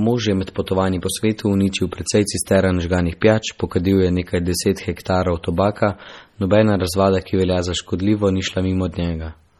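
From start to finish the speech carries heavy MP3 compression artefacts, likely from encoding at a low bitrate that fits roughly 32 kbps. Nothing survives above 18.6 kHz, and weak frequency lines flicker in and out from frame to frame, giving a watery, swirling texture with metallic chirps on s sounds and smeared consonant attacks. A simple low-pass filter would dull the treble without this unstable, bubbling churn.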